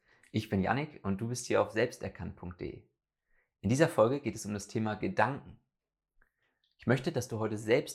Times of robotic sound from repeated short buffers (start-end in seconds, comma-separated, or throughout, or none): none